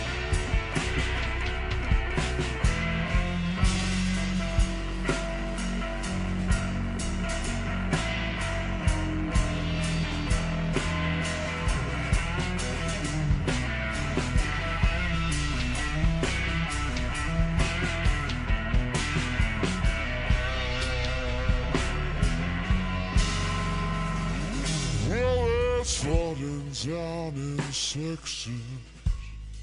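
Throughout, the audio plays noticeably slow and low, running at about two-thirds of its proper speed with everything shifted down by about 7 semitones. That is a wrong sample rate: the samples are being played out more slowly than they were captured, with no conversion, which fits 48 kHz material played back at 32 kHz.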